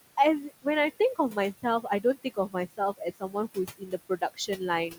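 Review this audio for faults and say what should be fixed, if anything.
Throughout, the background sinks and swells around the speech: noise suppressor artifacts, from the suppressor cutting steady-noise bands by about 18 dB, frame by frame, against room noise about 15 dB below speech.

Speech cut by the noise suppressor makes parts of the speech sound swallowed at 2.24–2.55 s (about a tenth of a second affected, drops up to about 19 dB), 3.78–4.6 s (roughly a third of a second, up to about 20 dB) and 4.9–4.99 s (about 12 dB). The suppressor mistook soft speech energy for noise.

Lowering the suppression depth and setting a floor so quiet speech is never gated would prevent both faults.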